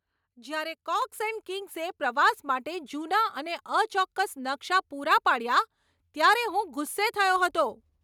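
At 1.02 s the microphone volume stepped up: the call software judged the input too quiet and raised the device's input gain in a single jump of about 5 dB. The speech and its background noise both become abruptly louder together.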